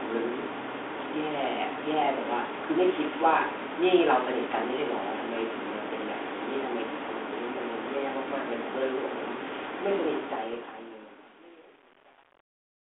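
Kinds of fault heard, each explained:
Bit errors on an ADPCM link: flipped bits in the G.726 stream, here carrying 32 kbit/s band-limited telephone audio, corrupt the decoder's step size and prediction, so one bad bit rings on for milliseconds rather than vanishing. From 10.53 to 10.58 s, a pop and rough burst appear despite a very low error rate. A waveform shows a jagged level jump; a spectrogram shows a brief broadband smear up to the 3.5 kHz band edge.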